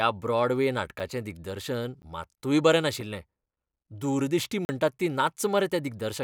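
Sharp clicks and brief dropouts break up this speech clip: a tick at 1.0 s just before "दिग्दर्शन मात्तूय बरें", another tick at 2.02 s ahead of "मात्तूय बरें", a tick at 3.01 s right after "दिग्दर्शन मात्तूय बरें", and an audible 40 ms hole from 4.65 to 4.69 s. Each is a block of digital silence, where the signal cuts out with no fade. Short gaps of about 2.5 to 10 ms sound like ticks, and the longer 40 ms gap sounds like a gap in the sound. This points to the output buffer not being filled in time.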